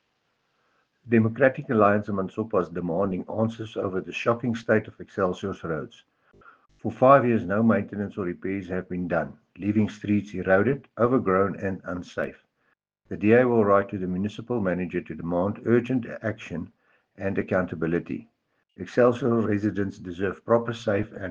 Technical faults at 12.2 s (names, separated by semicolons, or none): dropped samples